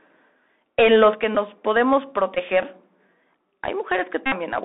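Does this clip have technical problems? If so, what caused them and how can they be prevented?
Yes. Throughout the speech there is a narrow, telephone-like quality with a granular hiss underneath, scratchy s sounds and a gritty edge on louder syllables. This is the Bluetooth CVSD headset codec. It encodes each sample as a single up-or-down bit at 64 kHz with an adapting step size, so it cannot follow fast, loud movements and adds slope distortion and grain. The band here runs from only about 150 Hz to 3.7 kHz, with nothing above it. This can be prevented by using a headset and phone that negotiate the wideband mSBC or LC3 voice codec, or a wired microphone.

At 1.14 s the voice and the background both drop abruptly by about 5 dB and stay at the lower level. This sounds like a microphone volume step-down, likely caused by the call software deciding the input was too hot and lowering the device's gain in one jump instead of riding it smoothly. 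This can be prevented by setting the input level correctly beforehand and disabling automatic microphone gain adjustment in the calling app.

There are three Bluetooth headset packet repeat events. The first, at 1.35 s, is a brief buzz. From 2.35 to 2.38 s there is a short rough buzz. From 4.26 to 4.33 s a longer, steadier buzz near 267 Hz sits on the speech. When voice packets between headset and phone are lost, the chip decodes the last good packet again. Repeating every 3.75 ms produces that buzz, and the gaps fit runs of roughly 15 and 60 ms. This can be prevented by keeping the phone close with a clear line of sight and reducing 2.4 GHz interference from Wi-Fi and other radios.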